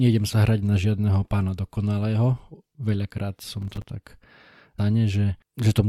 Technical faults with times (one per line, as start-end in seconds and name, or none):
3.62-3.84 processor overload crackle
4.78 stream segment skipped